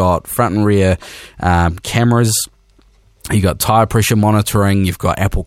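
No technical faults are audible.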